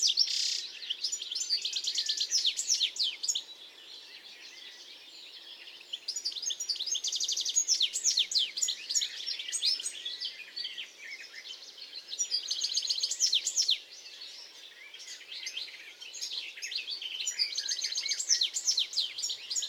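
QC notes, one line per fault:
No faults detected in this audio.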